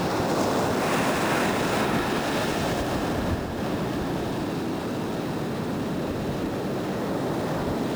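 From start to finish, a gritty, inharmonic fizz clings to the louder and brighter parts of the sound. It comes from crude rate conversion. Samples were repeated to reach the new rate, which fits a jump from 32 kHz to 44.1 kHz, without filtering. That leaves patterned error tones roughly 25 dB below the signal.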